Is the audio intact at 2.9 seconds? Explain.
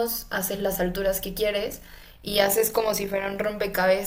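No. At 2.9 seconds the speech sits inside a stretch of overlap-add ripple running from 1.64 to 3.38 s. The signal was split into windowed frames and rejoined with an overlap whose windows don't add up to a steady gain, so the level dips and swells once per frame, by about 6 dB, at around 50 times a second. That turns the speech into a fast, rough flutter with a tremolo over it.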